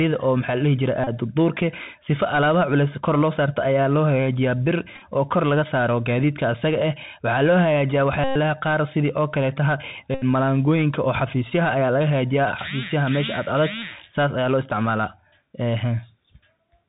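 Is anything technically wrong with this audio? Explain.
Yes. Throughout, the speech carries Bluetooth CVSD headset codec damage: a one-bit, slope-tracking coder consistent with a 64 kbps headset link. On a spectrogram the band ends abruptly at 4 kHz over granular broadband noise, with s sounds ragged and loud peaks smeared where the step size lags.

Bluetooth headset packet repeats occur at 1.04–1.09 s (30 ms), 4.95–5.01 s (37.5 ms, scattered in short runs), 8.24–8.36 s (116 ms) and 10.14–10.24 s (75 ms). Lost packets were replaced by replaying stale bits every 3.75 ms, producing a buzz near 267 Hz. The waveform shows repeating short cells, and the spectrogram shows harmonic stripes.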